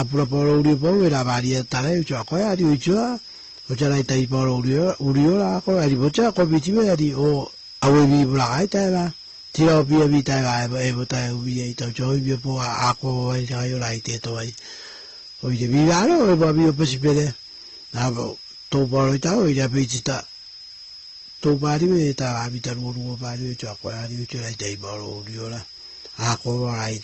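Speech throughout, with a thin, high whistle riding under it from start to finish. The whistle wanders between about 5.04 and 5.17 kHz at roughly 20 dB below the speech. That is a switching supply whistle, where a power supply drops into an audible burst mode and its changing load nudges the pitch around. The speech itself carries two different flavours of codec artefact layered on each other, with nothing at all above 8 kHz. That points to transcoding between lossy codecs, likely a low-bitrate AAC-LC encode, consistent with around 24 kbit/s, re-encoded to Opus at a similar rate. The second encoder wasted bits reproducing the first one's damage, added its own, and kept the lower bandwidth limit.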